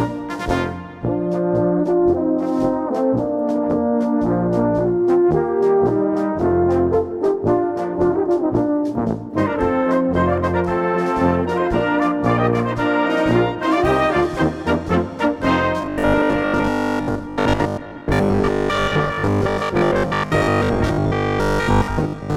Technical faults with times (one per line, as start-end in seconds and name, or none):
15.82-22.36 robotic sound from repeated short buffers